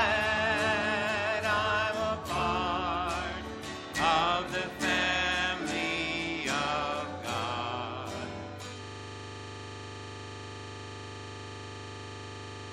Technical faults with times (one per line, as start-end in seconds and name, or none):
8.83-12.72 system hang loop